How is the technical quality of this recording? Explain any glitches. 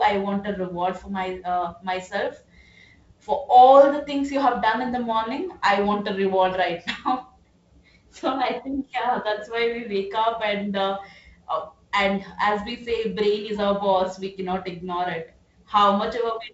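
No glitches or faults heard.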